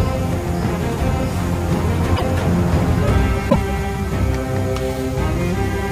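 At 2.16 to 2.23 s and 3.49 to 3.56 s, the audio skips ahead with a 70 ms glitch. The likely cause is a broken MP3 bit reservoir, spanning roughly three 26 ms frames.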